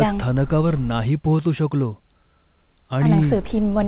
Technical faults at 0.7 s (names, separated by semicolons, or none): none